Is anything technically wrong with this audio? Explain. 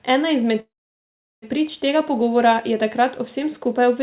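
Yes. From 0.6 to 1.45 s there is a call audio freeze. Packets were likely held up and the jitter buffer ran empty, so the last sound was stretched into a fading buzz, then about 0.75 s of silence. The speech resumes intact, just later. The waveform shows a short decaying tail, then a flat line. On the spectrogram, a smeared band below the 4 kHz ceiling collapses to blank.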